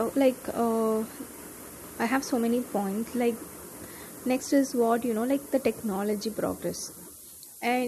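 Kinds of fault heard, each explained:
low bit depth with noise shaping: 6-bit speech whose rounding error is pushed upward, leaving a thin hiss about 10 dB down; spectrograms show noise rising steeply toward the top.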